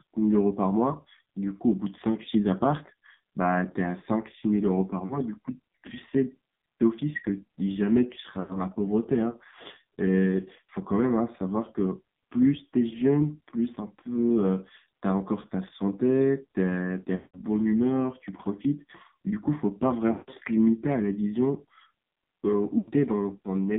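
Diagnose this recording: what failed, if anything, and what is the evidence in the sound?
Speech throughout has passed through an AMR narrowband mobile codec at the codec stage. Nothing is heard above about 3.7 kHz or below about 150 Hz, and the voice is buzzy and synthetic, with heavy codec damage that points to a low AMR-NB mode around 5.9 kbps. A plain telephone band-limit would only sound dull. Here the vocal-tract model, driven by a few pulses per subframe, adds the buzz and rough texture.

Lost AMR speech frames, caused by radio-side errors at the network stage, are heard at 5.06–5.20, 8.40–8.60, 17.16–17.41, 20.12–20.30 and 22.78–22.91 s. At each one the voice is smeared out on the last good pitch and then fades, and the longer runs near 17.2 and 20.1 s sink almost to silence. The lengths fit runs of roughly 2 to 9 missing 20 ms frames. A buffer underrun would instead cut to hard silence with clicks at the edges.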